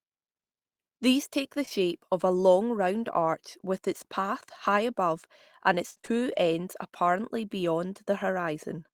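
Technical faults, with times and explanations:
1.65 s and 1.69 s: short concealed packet loss. Two back-to-back dropouts of about 20 ms each were patched by extrapolating the preceding sound, leaving a brief smear.
5.90 to 6.13 s: repeated packet loss (robotic sound). Four gaps, the longest 51 ms, were concealed in quick succession and cover over half the span, giving choppy speech.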